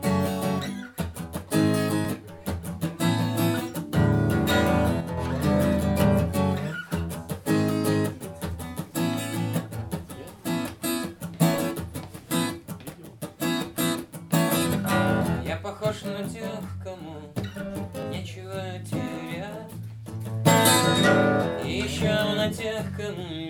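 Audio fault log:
2.05 s, 10.04 s and 18.03 s: audio missing between chunks. At each point a few milliseconds of sound simply vanish and the two sides butt together with no silence between them, so the sound jumps forward with a tiny skip. The gaps fall about 8 s apart, on a 4 s grid, which points to a recorder or processor that likely works in 4 s blocks and drops a sliver at some block changeovers. A dropout would leave a gap, and a channel loss would change the level. Here the sound is shortened rather than muted or thinned.
5.01 to 5.17 s: one channel drops out. For about 0.17 s the sound turns abruptly quieter, falling by about 6 dB, then snaps back to full level. One stereo side has likely gone missing for that moment, so after the two are summed, material common to both channels loses half its contribution and anything carried only on the lost side disappears. No time is lost and the sound keeps running, so this is not a skip between chunks.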